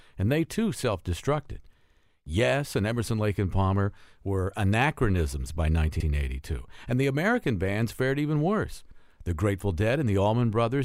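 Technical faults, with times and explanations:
1.90–2.03 s, 6.00–6.06 s and 8.91–8.98 s, repeated frames: a 64 ms block of sound plays again right after itself, twice at the first point and once at the other two, adding 128 ms and then 64 ms each time. The block length fits a pair of compressed frames being resent, so the decoder replays identical audio. Unlike a dropout, nothing is missing, and the stutter repeats real material rather than silence.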